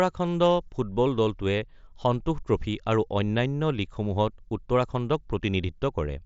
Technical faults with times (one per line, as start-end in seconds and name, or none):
1.57 concealed Bluetooth headset packet loss